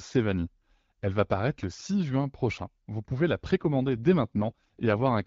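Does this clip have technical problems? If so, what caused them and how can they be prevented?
Yes. From 3.62 s to 5.26 s the speech turns rougher and more synthetic. That is an AMR rate drop. The band stays the same and nothing goes silent. The codec spends fewer bits on the speech itself and more on error protection, which is typical when a weak radio link forces a lower mode. Before the drop the AMR wideband (HD Voice) coding is light. The change in sound fits a step down from 12.65 to 8.85 kbit/s. Better signal coverage, or a call path that avoids weak radio links, prevents it.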